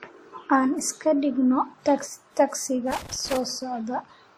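From the start, the speech carries two layers of compression artefacts at once, the artefacts of each codec heard together. This points to transcoding between lossy codecs, likely an Opus encode at around 48 kbit/s followed by a WMA re-encode at around 64 kbit/s. The second codec spends its bits on the first one's damage and adds its own. On a spectrogram, the energy stops at a flat ceiling near 19.3 kHz, with patchy, blocky gaps in the upper bands.

From 2.91 to 3.37 s there is loose connector crackle: an irregular burst of scratchy clicks and pops laid over the speech. A worn or dirty contact is making and breaking in quick succession. It chops the signal on and off, and any DC on the line turns each break into a pop. In the waveform, this stretch shows ragged dropouts and sharp spikes. On a spectrogram, it appears as a cluster of thin vertical broadband streaks.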